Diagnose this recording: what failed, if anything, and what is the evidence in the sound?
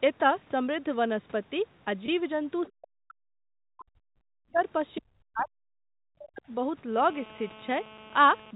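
Packet loss with pitch repetition, 2.06 to 2.08 s, at the network stage. For about 20 ms the speech briefly freezes into a held, slightly buzzy tone, then carries on. That fits a single lost 20 ms packet. The receiver concealed the gap by repeating the last pitch period of the speech. Because the gap was so short, the repeated cycle never fades to silence. It comes across only as a momentary smear of the voice.

Other side's voice leaking through, 2.66 to 2.72 s and 4.95 to 5.01 s, at the call-processing stage. Two brief scraps of a second voice sit under the main talker. The first is roughly 30 dB down. The second is roughly 20 dB down and clearer. The likely cause is the far end's audio playing from the talker's loudspeaker and reaching the microphone. The echo canceller left a residue of it in each scrap.

Speech suppressed in double talk, 3.68 to 4.61 s, 4.99 to 5.49 s and 5.72 to 6.49 s, also in call processing. 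The talker's voice ducks and cuts out in pieces, dropping by something like 40 dB at its deepest. About 0.7 s, 0.5 s and 0.7 s are affected in the three stretches. This likely happened because both ends spoke at once. The echo canceller mistook the near talker for echo and attenuated everything. The second stretch begins right at the second leak.

GSM phone buzz, 6.97 to 8.51 s, at the analogue wiring or input stage. A hard, raspy buzz at 217 Hz, rich in harmonics, runs steadily under the audio at about 20 dB below the signal. It has no relation to the speech. A nearby 2G handset in a call transmits in bursts 217 times a second. The analogue audio circuit rectified those radio pulses into audible buzz. The steady character matches a voice call rather than a data transfer.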